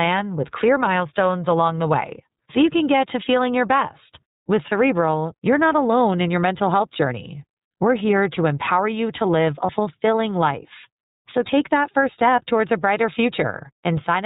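The whole clip is speech coded with the iLBC codec. Nothing above 4 kHz survives, so it sounds narrowband. Each frame is coded on its own, and the rough, slightly synthetic texture is plainly audible. It fits the 30 ms frame mode at 13.33 kbps.

From 9.66 to 9.70 s there is a case of lost iLBC frames. The gap fits one missing 30 ms frame. The decoder fills it by repeating the last pitch cycle mixed with noise, which gives a brief buzzy, held vowel. The voice is right again almost at once afterwards.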